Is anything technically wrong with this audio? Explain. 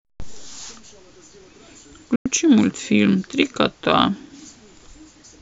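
Yes. From 2.16 to 2.26 s the speech goes silent in a digital broadcast dropout: the receiver muted for about 96 ms, which fits three lost frames, with a 3 ms fade. Unlike a tape splice, the programme resumes on time, so that sound is lost.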